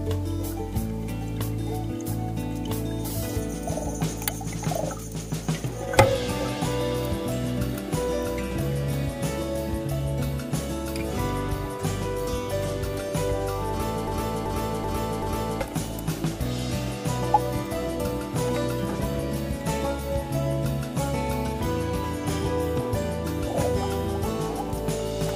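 At 14.07 s the audio gets stuck in a broken-record loop: a chunk about 0.38 s long plays four times back to back, exactly the same each pass, until 15.61 s. Whatever should have played in that second and a half is simply gone. That stutter most likely comes from the player, encoder or stream stalling and resending the last fragment it still had buffered.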